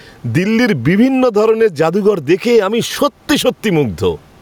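Gain pumping runs through the whole speech clip, with the gain swinging by around 15 dB; the room noise sits about 43 dB below the speech. That's likely input gain set far too high, with a fast limiter clamping down, leaving everything squashed.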